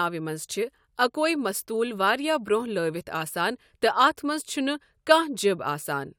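A short speech recording, with nothing technically wrong to be heard in it. No fault turns up at any point in the clip.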